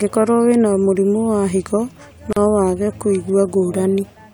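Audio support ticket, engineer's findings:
Separately encoded segments joined without trimming encoder delay or final-frame padding. Result: dropout in continuous speech, 2.33 to 2.37 s, gap of about 38 ms. Gap at a join of encoded pieces. Edges smeared by codec. Speech resumes exactly where it stopped, with no lost material. Probable component: segment concatenation stage. Fix: trim priming samples and end padding per segment, or use gapless encoding.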